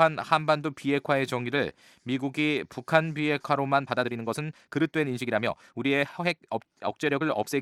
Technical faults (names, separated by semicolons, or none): time-stretched section